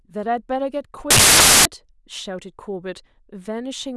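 From 1.1 to 1.65 s the speech turns to loud, harsh broadband noise: samples built from the wrong bytes, noisy low bits misread as the large part.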